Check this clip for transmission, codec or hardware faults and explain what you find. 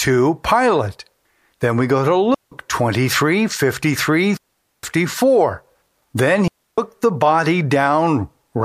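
Three digital wireless dropouts occur in this speech, at 2.34 to 2.52 s (174 ms), 4.37 to 4.83 s (465 ms) and 6.48 to 6.78 s (300 ms). Each time the radio link lost too much data, so the receiver muted with a very quick fade, leaving a clean hole of near silence with no noise burst on either side.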